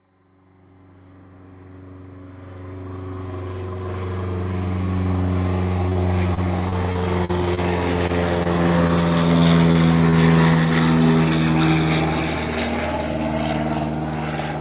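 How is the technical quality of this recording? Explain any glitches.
The recording has network glitches in its middle section. The audio has passed through a narrowband call path: nothing is heard above 4 kHz, which fits a G.711 mu-law call at 64 kbps.

From 5.86 to 7.59 s there is repeated packet loss with a robotic sound. Eleven gaps follow one another, the longest about 41 ms. The receiver patches each hole by extending the last sound, so about 12% of that span is filled in. The audio turns choppy, with pieces missing.

Short concealed packet loss follows at 8.07–8.11, 8.43–8.47, 8.87–8.91, 9.72–9.76 and 10.10–10.14 s. Each time, about 20 ms of audio failed to arrive. The decoder continues the preceding sound and then blends back. Each one is a brief smear or wobble.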